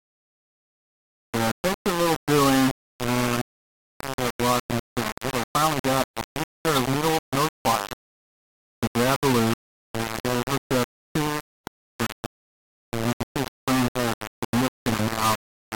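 Throughout, the audio was likely reduced to very low bit depth without dither, rounded to roughly 3 bits. The rounding error follows the signal at only about 5 dB below it, so it sounds like grainy distortion on quiet passages or near-steady hiss on denser ones.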